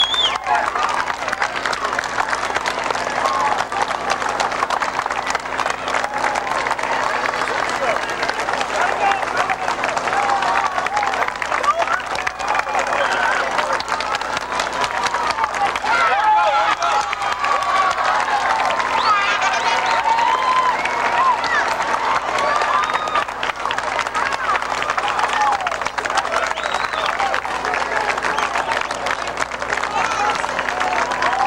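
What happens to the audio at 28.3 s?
Nothing goes wrong at 28.3 s: the audio plays through that moment intact, with no dropout, click or other fault to be heard.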